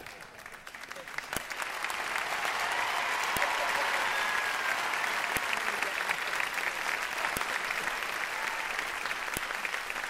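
Sharp, loud clicks at 1.37, 3.37, 5.37, 7.37 and 9.37 s, every 2 s: a file header played as audio, as each joined piece's header bytes sound as samples.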